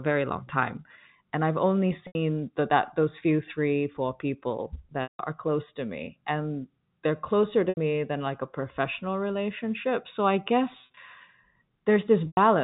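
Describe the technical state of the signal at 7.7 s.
Packet loss with pitch repetition runs from 7.69 to 7.77 s, right after "me and they're closer". About 80 ms of audio went missing, which fits a run of several short packets. The receiver bridged the hole by repeating the last pitch period and fading it over roughly 50 ms, so a brief held buzz decays toward silence. The speech then cross-fades back in at "than like a professional", still band-limited by the G.711 telephone path.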